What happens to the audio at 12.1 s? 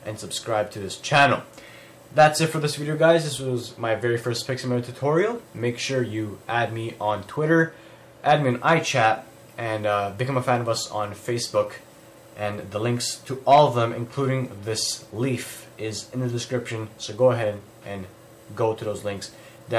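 Nothing goes wrong at 12.1 s; the audio carries on intact through that point with no dropout, click or other fault.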